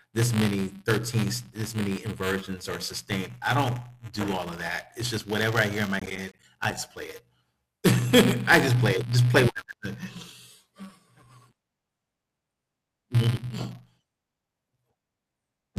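A steady robotic buzz at about 188 Hz runs throughout the speech. This is buffer tearing: writer and reader cross inside each period, consistent with a 256-sample buffer, splicing in a sliver of audio from a lap earlier. From 6.00 to 6.77 s, just after "i hear in my", a burst of gritty crackle is processor overload crackle, with roughly twenty short buffers of about 10 ms missing their deadline and dropping out as silence.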